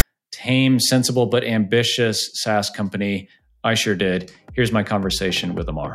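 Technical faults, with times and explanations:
0.00 s, file tags played as audio: a click-length burst of harsh rasp with hard edges opens the clip, offset to one side. Text metadata at the head of the file is being decoded as sample values, and character bytes yield that lopsided, grating waveform.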